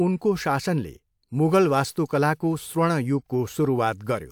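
No technical faults are audible anywhere in the speech.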